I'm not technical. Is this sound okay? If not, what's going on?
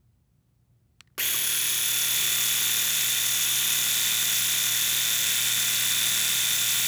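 Yes, nothing stood out as a problem when listening to this sound.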